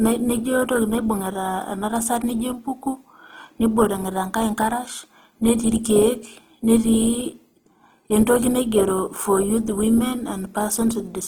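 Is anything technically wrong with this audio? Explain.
Yes. Throughout the speech, Opus compression is the likely cause, running short of bits in its CELT music mode at a rate that fits about 16 kbps. Starved bands get filled with folded copies or noise, so tones sound plainly grainy and rough, though full bandwidth remains, up to about 20.2 kHz.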